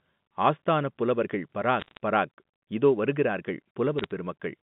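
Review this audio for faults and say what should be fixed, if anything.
Bit errors on a digital phone line flipped bits in individual G.711 samples: roughly half a percent of bits at 1.80–1.97 s, just after "ஆஸ்தானப் புலவர்கள்", and a few tenths of a percent at 3.98–4.11 s, following "பராக் இதோ வருகிறார்கள்". Hits on high-order bits, or on the sign of a loud sample, jump single samples far off, producing sharp ticks that gather into brief bursts of crackle over the speech. A cleaner transmission link with error detection and correction would prevent these flips.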